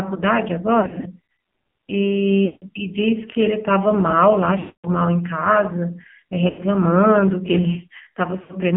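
Speech heard through an AMR narrowband mobile codec at a low rate, which fits about 5.9 kbps: the band sits between roughly 150 Hz and 3.5 kHz, nothing above 4 kHz survives, and heavy coding leaves the voice buzzy and synthetic throughout. Lost AMR speech frames occur at 0.80–1.07 s, 2.46–2.71 s, 4.60–4.88 s, 6.50–6.63 s and 8.42–8.54 s. The decoder reuses the last good pitch and vocal tract settings at falling gain, so the longer gaps stretch and fade, the 4.60 s one longest at about 240 ms.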